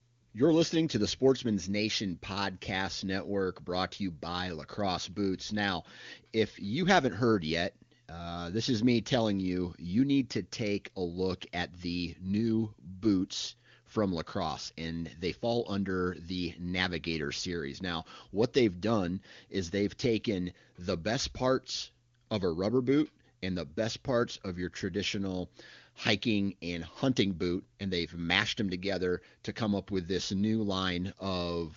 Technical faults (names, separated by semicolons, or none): none